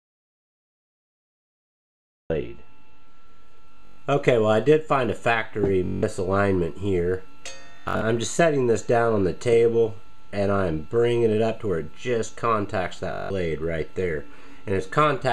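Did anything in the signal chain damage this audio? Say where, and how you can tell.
Yes. An audio dropout to silence covers the opening to 2.30 s, already under way at the start, with true silence and no room tone, likely from a lost input link.

Bluetooth stutter on the wireless link at 3.85, 5.86, 7.76 and 13.13 s: short slices repeat as a buzz, then the sound resumes further on, unlike a dropout's silent gap.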